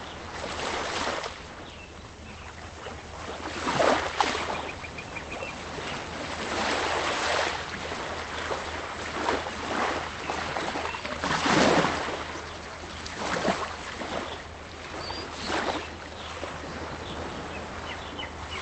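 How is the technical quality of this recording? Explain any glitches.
The recording has no glitches: the audio comes through a call path with an Opus codec, and its content stops at about 8 kHz, which fits a low-bitrate voice-call setting of around 24 kbps.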